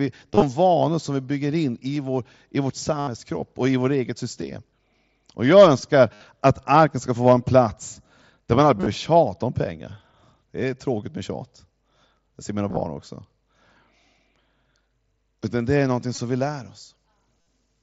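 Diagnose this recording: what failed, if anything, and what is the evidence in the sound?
Concealed Bluetooth headset packet loss on the wireless link at 0.33, 1.96, 2.99, 6.14, 8.77, 12.69, 16.15 and 17.41 s. Gaps are refilled with repeated recent waveform, so longer runs are heard as buzzy held tones rather than silent dropouts.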